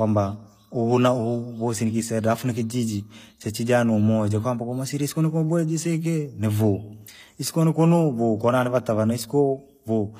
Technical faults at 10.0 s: HE-AAC compression

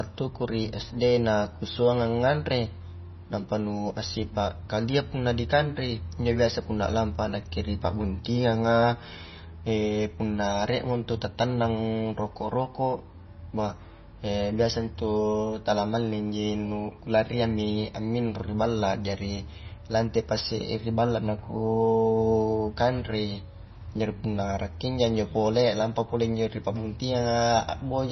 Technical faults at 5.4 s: MP3 compression

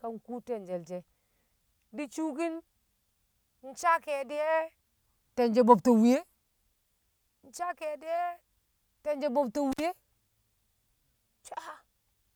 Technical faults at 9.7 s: intermittent contact

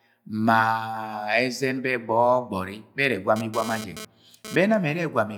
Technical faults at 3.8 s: GSM phone buzz

